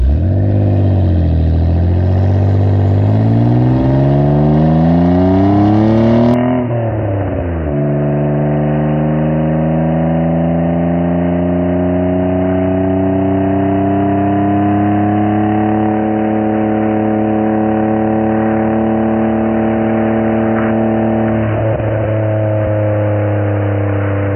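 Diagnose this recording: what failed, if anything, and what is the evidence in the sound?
At 6.34 s the sound abruptly turns dull and boxy, nothing above 3 kHz, about 5 dB quieter, with a new noise floor roughly 40 dB down, and stays so to the end. That points to an input switched to a poorer device, likely at driver level. The changed noise and level, not just bandwidth, distinguish it from a codec fallback.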